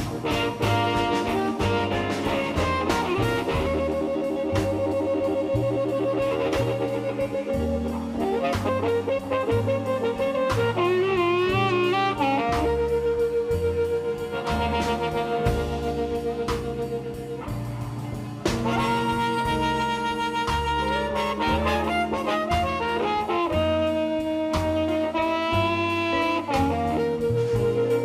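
No technical faults can be heard anywhere in the clip. There are no dropouts, timing slips or level problems to point to at any moment.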